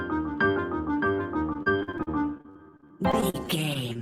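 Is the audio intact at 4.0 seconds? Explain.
No. From 3.93 to 4.02 s there is short concealed packet loss. About 20 ms of audio never arrived, and the receiver filled the gap by continuing the preceding sound before blending back. That content is gone, heard as a brief smear or wobble.

Overlapping it, from 3.97 to 4.01 s, is a short stall from a late packet. The jitter buffer ran dry, and the receiver held the last sound for 17 ms until the packet arrived. Unlike the loss, nothing is missing. A sound simply lingers slightly too long.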